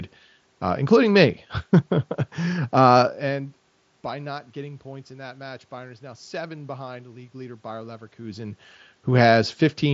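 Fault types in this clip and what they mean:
No faults detected; the level shifts near 3 s and 8 s come from the talker moving, the background is room noise, and the band ending near 7.7 kHz is what a wideband mSBC Bluetooth headset link passes.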